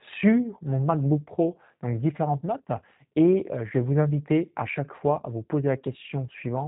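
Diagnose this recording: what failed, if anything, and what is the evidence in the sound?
The speech sounds slightly rough and synthetic from start to finish, with audible processing grain and nothing above about 3.8 kHz, so sibilants are dull and the top end is gone. That points to the codec stage, specifically the G.729 codec, at a rate that fits 8 kbit/s. The decoder rebuilds each 10 ms frame from a vocal tract filter, a pitch predictor and a few pulses per half-frame, which produces that synthetic roughness and band limit.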